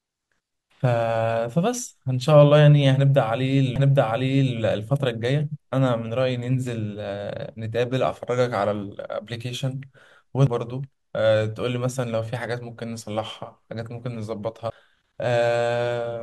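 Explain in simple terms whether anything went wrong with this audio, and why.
At 3.76, 10.47 and 14.7 seconds the speech gives a small tick and suddenly jumps to a different point, with the last jump leaving a slightly longer gap. These are CD skips: a knock or disc flaw made the laser leap across the disc's spiral track.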